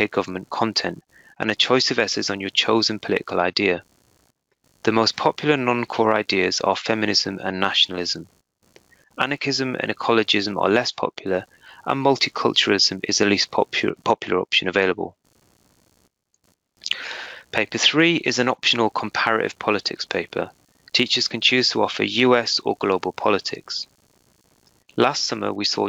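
Right through the clip there's computer activity noise, a faint buzzy pulsing at roughly seventy per second, well below the sound, where the computer's load is leaking in through a shared ground.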